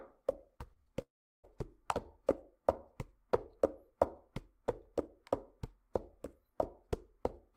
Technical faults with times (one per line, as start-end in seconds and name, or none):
0.57-0.88 short concealed packet loss
1.02-1.45 long network dropout